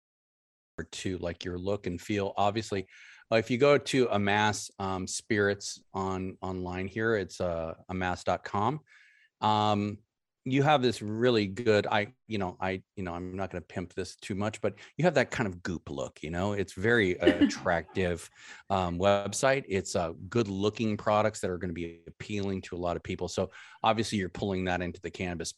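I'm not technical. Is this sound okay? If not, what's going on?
No, there's a cut-off start: the recording began a beat late. Nothing plays until about 0.78 seconds, then the speech kicks in abruptly with "to like your look", already mid-sound, with no natural lead-in, because whatever came before simply wasn't captured.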